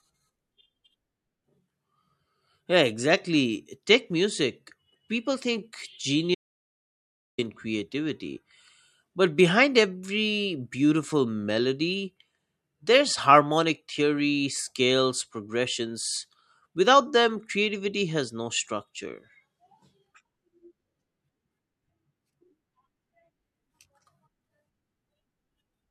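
At 6.35 s the speech cuts out to an audio dropout to silence lasting about 1.04 s, until 7.38 s. The gap holds silence with no room tone, and it likely comes from the input being lost while recording continued, so that stretch of speech is gone.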